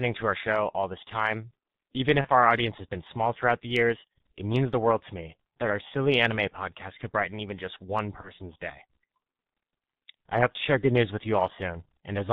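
Speech runs through a heavy G.723.1 codec throughout. Nothing above 4 kHz survives, so it sounds muffled and hoarse, with smeared consonants, which fits a roughly 6.3 kbit/s stream. VoIP packet loss concealed by the speech codec appears at 2.21 to 2.28 s and 8.21 to 8.32 s. Each gap fits one lost 30 ms frame, patched by extrapolating the last pitch and filter into a brief, fading stretch that lingers afterward.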